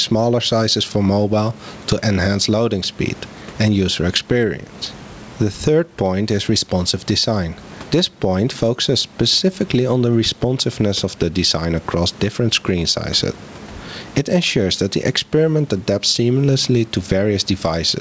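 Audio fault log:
Throughout, gain pumping: the level swings by something like 15 dB. Quiet and loud passages end up close in level, so the speech sounds squashed. The likely cause is input gain set far too high, with a fast limiter or compressor clamping down on each peak. The noise sits in a band that stops at 8 kHz, which points to a wideband call codec such as G.722.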